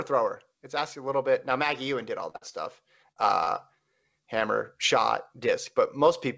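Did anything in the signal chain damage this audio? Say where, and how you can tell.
Yes. Short concealed packet loss at 2.30, 2.49, 3.12 and 3.44 s: the network lost 20 to 40 ms each time, and the receiver bridged each gap with brief smears.

Burst of packet loss from 2.36 to 2.43 s, right after "maggie ewan did all": about 60 ms went missing, a fading continuation filled the gap, then the audio skipped ahead.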